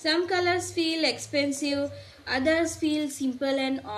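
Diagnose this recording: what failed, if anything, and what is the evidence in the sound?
Call processing failed: an echo canceller at the loudspeaker end likely passed part of its pickup back, an echo leak. Faint delayed copies of the speech, about 30 to 35 dB down, appear at 0.67, 1.25, 1.55, 1.84 to 2.26 and 3.28 s, lagging 203 ms, then 284 ms from 1.55 s.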